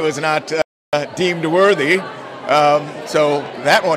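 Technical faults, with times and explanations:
0.62 to 0.93 s, audio dropout to silence: the sound cuts off mid-flow and resumes after 0.31 s of dead silence with no room tone, likely from a lost input while writing continued. The waveform goes flat, leaving a blank spectrogram column.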